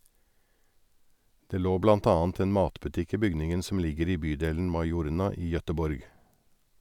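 No technical faults can be heard anywhere in the speech.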